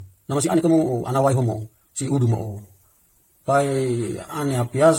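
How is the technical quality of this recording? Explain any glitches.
Technical quality is poor. Two faults stand out, one across the whole clip and one at the start.

Generation loss runs throughout. The speech sounds swirly, hollow and smeared, and consonant attacks are blurred. This is likely the result of repeated lossy encoding, around seven passes, with a character that fits AAC-LC at 64 kbit/s. Each pass quantises again on a shifted frame grid. Noise and spectral gaps pile up beyond what one encode would leave.

A time-stretched section runs from 0.00 to 2.36 s. Here the speech plays about 1.91 times faster, yet the pitch stays the same. It sounds rushed, then the pace changes abruptly at 2.36 s. Software likely squeezed this part to fit a shorter length. It kept the pitch by dropping short slices of audio.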